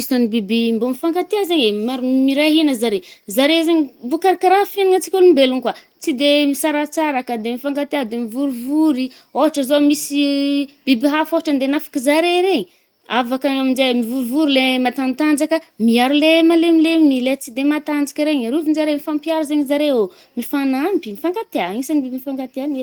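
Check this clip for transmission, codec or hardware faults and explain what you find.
Nothing here points to a transmission, codec or hardware problem; the speech simply comes through the Opus voice compression at 24 kbps in its fullband hybrid mode, leaving only the light softening you'd expect from that setting.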